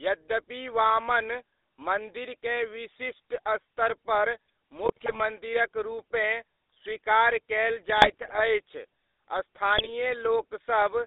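Throughout, the speech carries the buzzy, gravelly roughness of the GSM full-rate codec, which fits a 13 kbit/s pulse-excited vocal-tract model, confined to roughly 300 Hz to 3.7 kHz. GSM bit errors follow at 4.85–5.20 s, 7.97–8.41 s and 9.78–9.89 s, where corrupted filter, pitch and gain parameters produce squawks, pops and gargling.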